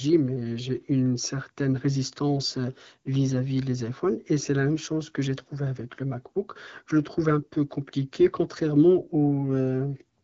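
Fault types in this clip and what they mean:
No faults found: the speech carries the band-limited character of a wideband phone codec at a mid-range rate, with nothing that points to a fault.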